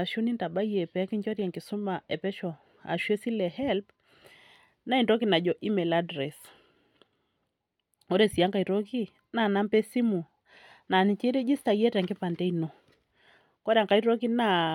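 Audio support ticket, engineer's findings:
Listened through the speech recording and found nothing to flag, so no findings to log on this one.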